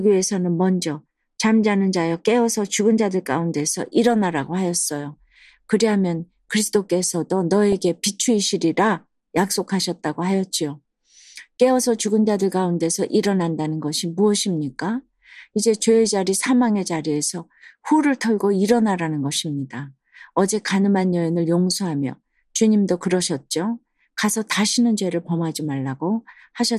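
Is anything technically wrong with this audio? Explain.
Yes. Throughout, the speech sounds plainly dull and gurgly, with granular distortion, likely from MP2 compression at a low bitrate, with upper sub-bands dropped and the rest coarsely quantised. At 7.72 s and 12.92 s there is brief DAB burbling: uncorrected reception bit errors corrupt the MP2 data, producing short blips of noise in individual sub-bands.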